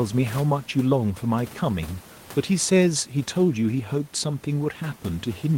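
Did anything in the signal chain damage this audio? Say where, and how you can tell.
No, nothing in the signal chain damaged this speech.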